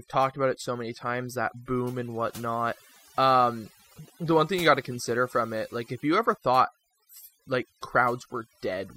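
Right from the start the speech carries overdone noise removal. The denoiser was pushed too hard, so bands near its noise estimate get pulled down along with the quieter bits of the voice. The background drops and breaks up into twinkly specks.

At 4.63 s, between "the one thing you" and "got to consider from", there's a quick burst of DAB burbling. Weak reception let bit errors, roughly a third of a percent, slip past error correction into the MP2 data, so wrong samples put short blips of noise into single sub-bands.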